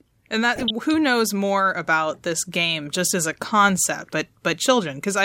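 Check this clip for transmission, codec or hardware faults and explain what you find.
One transmission fault is present in this speech clip: DAB burbling from 0.56 to 0.70 s. Under weak reception, bit errors survive the error correction and reach the MP2 audio data, here at a residual rate of a few tenths of a percent. Corrupted samples put short blips of noise in single sub-bands, and corrupted scale factors throw individual sub-bands up or down in level for up to a frame. The burst length fits roughly six damaged frames, heard as a short burst of burbling over the speech.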